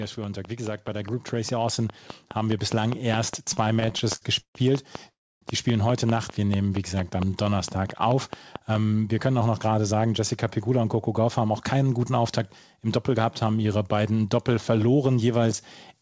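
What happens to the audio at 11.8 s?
At 11.8 s you're inside a jitter buffer speed-up from 9.26 to 13.18 s. Snipped pitch periods make the speech run 7% faster at the same pitch, so it sounds hurried.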